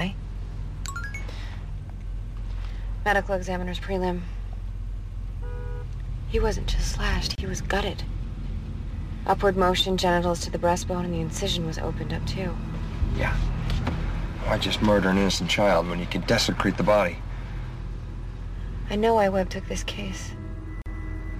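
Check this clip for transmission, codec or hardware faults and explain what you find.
Two faults show up, both of the same kind. Gaps at joins of encoded pieces occur at 7.35 to 7.38 s (about 28 ms) and 20.82 to 20.86 s (42 ms). Separately encoded segments were spliced without trimming each run's start delay and end padding. Continuous sound drops into brief silence with smeared edges, then resumes where it stopped.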